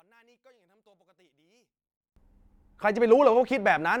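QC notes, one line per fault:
0.00–2.16 s, one channel inverted: when the stereo pair is summed to mono, the speech drops by about 37 dB and nearly disappears. What remains is faint. The likely cause is reversed polarity on one channel. The two channels carry almost the same centred speech, so in mono each cancels the other. Only the small difference between them survives. At 2.16 s the full level returns.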